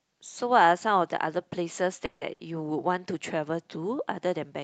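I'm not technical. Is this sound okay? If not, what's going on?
No. There are two problems close together, a little past two seconds into this speech.

From 2.05 to 2.23 s there is a call audio freeze. The likely cause is that pieces of the call's audio were held up on their way across the network, so the receiving end ran out of sound to play. It filled the wait of about 160 ms by stretching the last sound into a fading buzz or hiss. When the delayed audio arrived, the speech carried on from exactly where it stopped. Nothing is lost, but there is a short unnatural hold, and everything afterwards runs about 160 ms late.

Just after, from 2.33 to 2.49 s, comes a burst of packet loss. This time a short run of audio never arrived at all, or arrived too late to use. The receiver covered the hole with about 60 ms of the previous sound, trailing off, and then the speech jumped ahead. About 60 ms of what was said is simply gone, so it sounds like a small skip with a brief smeared buzz or hiss.

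The sound came through a call app, which trims off the highest treble above about 8 kHz, so it sounds less crisp than a direct recording.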